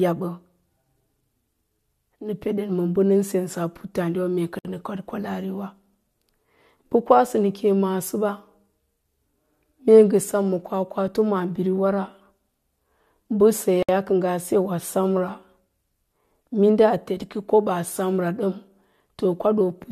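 At 4.59 s and again at 13.83 s the speech drops out for about 60 ms: a gap at a join of encoded pieces. Separately encoded segments were butted together with encoder delay and end-frame padding left in, leaving brief silences with smeared edges before the sound resumes where it stopped.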